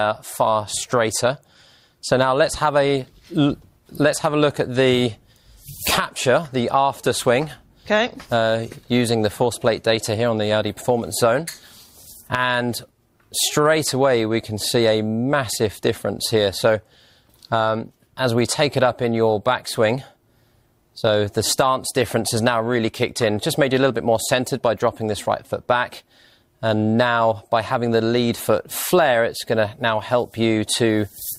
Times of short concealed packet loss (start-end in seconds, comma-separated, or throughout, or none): none